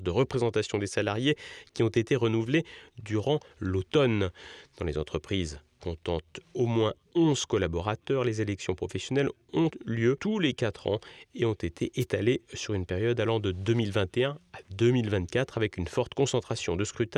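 A wireless microphone noise hit occurs from 12.00 to 12.05 s, between "ans et ont été" and "sur une période allant": the FM radio link fades as reflections cancel, letting receiver noise surge into a brief swish of static over the speech.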